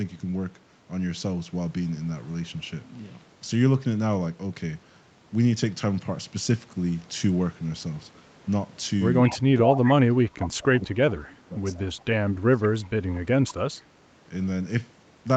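From 9.23 to 9.42 s, at 9.71 to 9.77 s, from 10.46 to 10.8 s and at 13.16 to 13.2 s, a copy of the speech returns 176 ms late. This is an echo leak, likely from a loudspeaker echo canceller letting residue through. It is about 15, 5, 25 and 35 dB below the speech, and its fixed delay separates it from room reverberation.

Interleaved with these, from 9.46 to 10.98 s, 11.23 to 11.57 s, 11.76 to 11.98 s and 12.42 to 13.58 s, the talker's level dips in chunks by up to about 25 dB. This is speech suppressed in double talk, likely the canceller ducking both sides while they overlap. The drops follow the overlap, not the signal level, so it is not a gate.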